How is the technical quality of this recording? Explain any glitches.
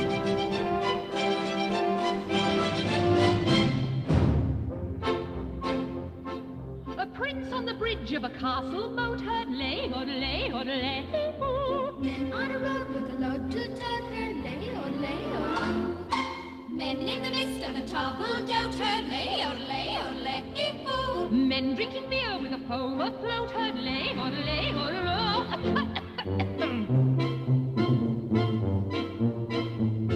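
Nothing in the recording stood out as a technical problem on listening, so there are no glitches to explain.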